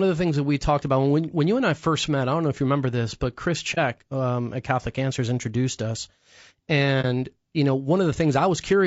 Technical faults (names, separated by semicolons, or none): low-delay AAC compression; AAC frame loss with muting